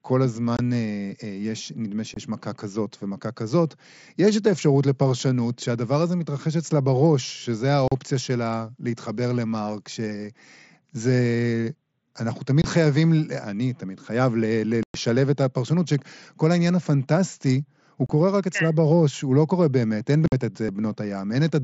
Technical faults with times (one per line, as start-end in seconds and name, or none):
0.57-0.59 unconcealed Bluetooth headset packet loss
2.14-2.17 unconcealed Bluetooth headset packet loss
7.88-7.92 unconcealed Bluetooth headset packet loss
12.62-12.64 unconcealed Bluetooth headset packet loss
14.83-14.95 unconcealed Bluetooth headset packet loss
18.06-18.10 unconcealed Bluetooth headset packet loss
20.28-20.32 unconcealed Bluetooth headset packet loss